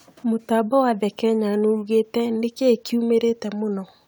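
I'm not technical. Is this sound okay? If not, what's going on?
Yes, this sound is okay; nothing is going wrong in it.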